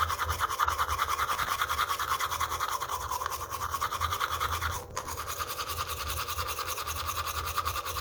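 The processor fell behind on its short audio buffers, around 5 ms each, and missed many deadlines in a row, replaying stale audio with hard edges. This processor overload crackle is a gritty tearing burst from 1.32 to 1.57 s and again from 4.76 to 5.12 s.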